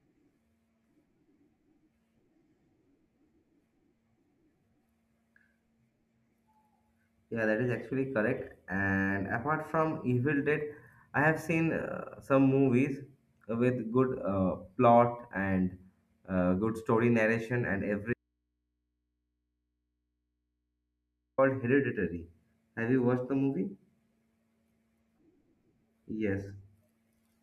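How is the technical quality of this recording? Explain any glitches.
The recording has one clear glitch. An audio dropout to a faint residue runs from 18.13 s to 21.38 s, right after "good story narration and." The speech vanishes abruptly for about 3.2 s, leaving only mains hum roughly 55 dB below the signal. This is likely a broken connection whose downstream input stayed live and picked up hum.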